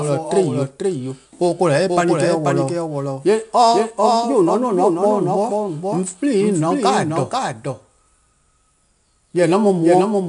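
From start to finish the speech carries a doubled audio track: a second full-band copy trails the original by about half a second, roughly 5 dB quieter, with no decay or room colour to soften it. The likely cause is the same signal reaching the mix twice, once through a slower path. It sounds like a dry, distinct echo chasing every phrase. On a waveform each burst reappears half a second later at lower height, and a spectrogram shows every syllable's pattern repeated, shifted right.

Also present throughout is 4-bit ADPCM compression, with plainly audible damage. Each sample is coded as a coarse step from a prediction, so the error becomes broadband grit that rises and falls with the speech level. Loud passages carry a hiss, and sharp onsets distort where the step size lags behind the signal. Nothing reaches above 10.6 kHz, which fits a bitrate near 89 kbps. On a spectrogram, noise fills the gaps between harmonics during loud stretches, and everything above 10.6 kHz is empty.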